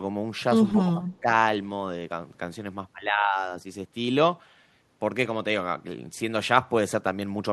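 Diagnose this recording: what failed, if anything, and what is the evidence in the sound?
The failure is in call processing. Between 0.72 and 1.26 s the speech dips sharply, falling by about 15 dB at its deepest. The losses add up to a little under half a second. The level then recovers. The likely cause is speech suppressed in double talk. Both ends were talking together. The echo canceller could not separate this talker from the returning loudspeaker echo, so it turned the near-end speech down as well.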